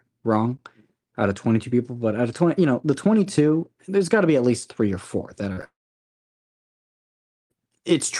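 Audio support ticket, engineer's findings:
Short concealed packet loss, 5.53–5.59 s and 5.61–5.64 s: brief smear/wobble in the speech, about 40 ms then about 20 ms of audio missing. Receiver-side concealment bridging late packets by extending prior pitch or noise, then crossfading back.

Long network dropout, 5.64–7.52 s: speech tails off into a fading buzz or hiss, then near-silence for about 1.8 s before resuming with the intervening audio gone. Likely a transport-path outage; the concealment decays to nothing while no packets arrive.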